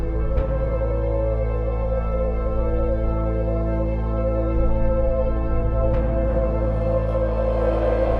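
There are no technical faults to describe in this audio.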